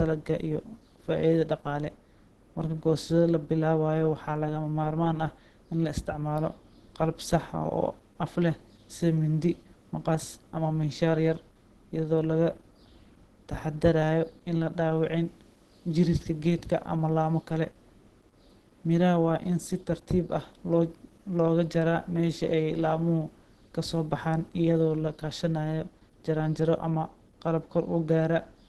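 Throughout the speech, the sound is muffled and hoarse, with a grainy roughness. Nothing reaches above about 12.2 kHz. The likely cause is Opus compression in its hybrid speech mode. Too few bits reach the upper bands, which points to roughly 16 kbps.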